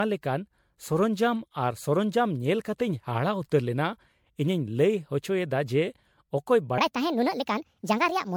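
The speech has most likely been through MP3 coding many times over, perhaps around seven passes at something like 96 kbit/s. That is generation loss: each re-encode quantises on a shifted frame grid, so the damage stacks up, leaving a swirly, hollow, smeared sound with blurred consonant attacks throughout.

From 6.78 s to the end, a section at the wrong speed runs 1.5 times too fast, likely from being fitted to the wrong clock. Speed and pitch rise together, lifting the speech by roughly seven semitones so that it sounds hurried and thin.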